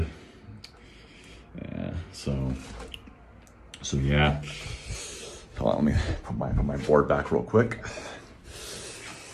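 No technical faults can be heard in this clip, so there is nothing to describe in time order.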